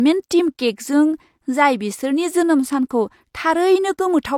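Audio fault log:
Throughout: low-bitrate audio saved at a high bitrate. The speech carries the artefacts of an aggressive low-rate encoder, yet the spectrum reaches up to a clean wall at 18.5 kHz. That wide band suggests a generous final encoding. The damage comes from an earlier pass, which fits a low-rate HE-AAC stage. The likely cause is that a low-bitrate file was re-encoded as high-bitrate MP3. The second encoding cannot restore what the first removed.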